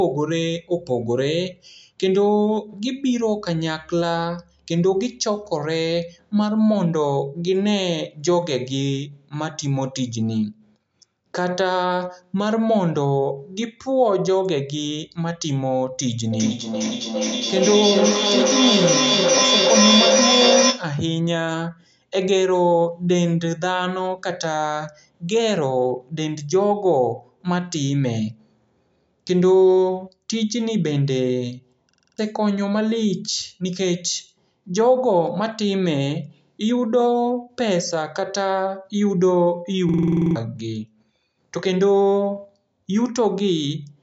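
Feedback echo between two devices runs from 16.32 to 20.99 s. Two devices in the same room are on the call, and one plays out what the other's microphone sent. That microphone picks the sound up again, and neither echo canceller removes it because each only cancels its own playback. The speech comes back roughly every 0.4 s, thinner and more ringing each pass. Its loudest repeat reaches about 2 dB above the direct speech, so the repeats stack up instead of fading.

A system hang loop follows from 31.90 to 32.18 s. The computer or driver stalled while the sound hardware kept cycling its ring buffer, replaying the same 46.44 ms slice six times. That loop length fits a 2048-sample buffer. At 21.5 repeats per second it sounds like a rapid stutter rather than a pitch, and about a third of a second of real audio is lost.

The same system hang loop returns from 39.89 to 40.36 s. The same 46.44 ms slice now repeats ten times at 21.5 Hz, which makes a longer stutter and drops about half a second of audio. 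The call's microphone processing passes nothing above 8 kHz.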